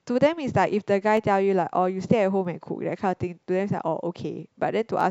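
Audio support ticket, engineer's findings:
Regular click in the speech every 1.28 s, roughly four times between 1.17 s and 5.01 s. Clock drift buffer slips, likely two devices on separate clocks disagreeing by around 150 ppm, so the buffer drops or repeats a handful of samples (around seven) each time.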